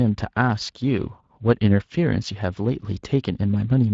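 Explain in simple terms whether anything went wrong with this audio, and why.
Something did go wrong. The whole clip, all 4 seconds, carries clear Speex codec damage. This older voice-chat squeezing makes speech sound hoarse and grainy. Unlike background hiss, which sits apart from the talking, this roughness lives inside the speech itself.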